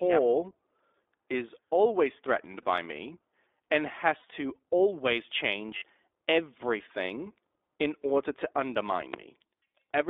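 The whole speech clip passes through the iLBC codec. The sound is band-limited to about 300 Hz to 3.6 kHz and is plainly rough and synthetic, which fits 15.2 kbps with 20 ms frames.

Lost iLBC frames occur from 2.62 to 2.65 s, 4.18 to 4.25 s, 5.78 to 5.84 s and 8.03 to 8.05 s. These gaps of 20, 60, 40 and 20 ms are filled with a held, buzzy repeat of the last pitch cycle. Speech recovers at once.

A loud pop sits at 3.74 to 3.78 s, about 10 dB above the speech, and another at 9.14 to 9.18 s, about 15 dB above. Each is a single sharp pulse over continuing speech, likely an electrical or driver glitch.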